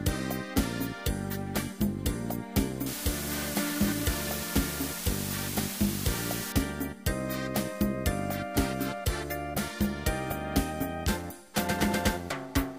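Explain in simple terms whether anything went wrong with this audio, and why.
From 2.86 s to 6.52 s, a steady, even hiss appears, almost as loud as the sound itself, with no crackle or harshness mixed in. It then stops as suddenly as it began. This is low bit depth with dither. The audio was stored with very few steps of loudness, which fits about 5 bits. A little random noise was added before rounding, so the rounding errors became this smooth hiss instead of gritty distortion.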